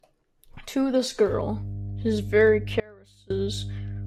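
Throughout the clip a block size mismatch (truncated) produces a steady buzz at 46.9 Hz, which fits 1024-sample blocks being written with their ends discarded by the next stage. From 1.29 s to the end, mains hum at 50 Hz sits roughly 10 dB below the speech, a steady low tone coupled in from the power line. Between 2.80 s and 3.30 s an audio dropout to a faint residue removes the speech for about half a second, leaving only a faint trace roughly 25 dB down. The cut is abrupt, likely a lost signal upstream while the following path stayed live.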